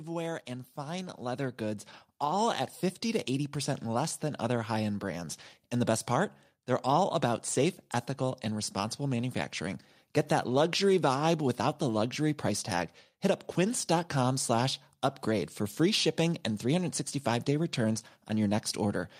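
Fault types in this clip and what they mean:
Automatic gain rising: the level-control stage judged the incoming speech too quiet and stepped its gain upward slowly rather than all at once, adding about 8 dB between 0.45 and 3.33 s. Because the boost applies to everything in the signal, the talker and the background noise grow louder together over those three seconds, a gradual swell that has settled by the time "less than other high" is spoken.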